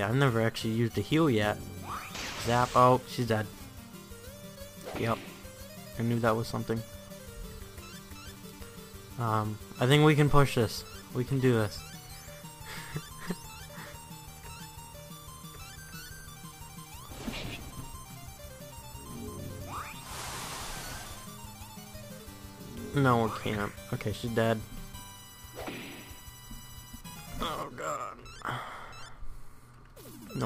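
No technical faults can be heard anywhere in this audio. There is no event to place on a timeline.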